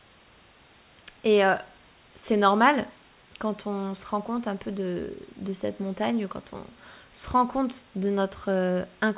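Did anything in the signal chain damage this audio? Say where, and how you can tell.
No, nothing in the chain damaged this speech: it arrives through a G.711 A-law call path at 64 kbps, which, as that codec should, leaves nothing above 4 kHz, and the room noise sits about 33 dB below the speech as part of the original recording.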